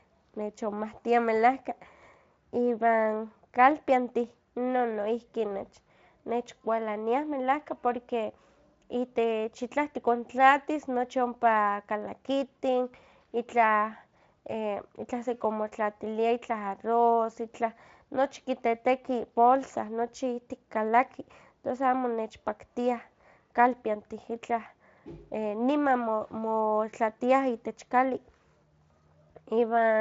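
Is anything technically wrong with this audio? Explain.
No, nothing technically wrong.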